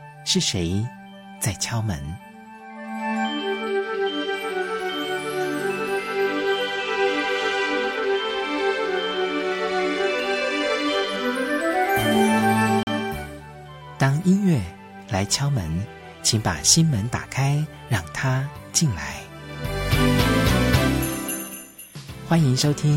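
At 12.83 s the sound drops out abruptly for about 40 ms and returns at 12.87 s, heard as a short hole. This is a block of digital silence: a run of samples was replaced by zeros, so the waveform jumps straight to nothing and back with no fade. A gap of that length fits the output buffer not being filled in time, or a calculation producing invalid values that were zeroed.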